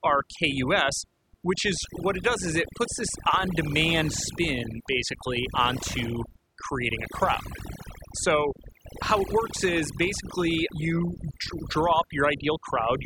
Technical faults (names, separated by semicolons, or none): overdone noise removal